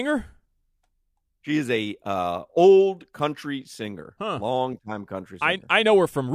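Nothing technically wrong turns up anywhere in this short bit of speech, so there's nothing here to flag.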